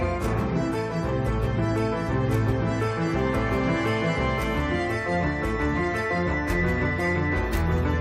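No technical faults can be heard anywhere in the audio; the signal holds steady throughout, with nothing that points to a problem in recording, processing or transmission.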